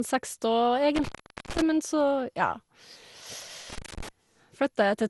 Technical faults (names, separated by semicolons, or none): generation loss; intermittent contact